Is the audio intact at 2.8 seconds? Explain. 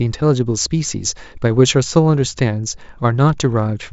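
Yes, the speech at 2.8 seconds plays through intact, with no audible fault at that moment.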